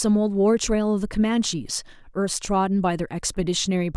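A short speech recording with no technical faults to report, its signal holding steady and intact all the way through.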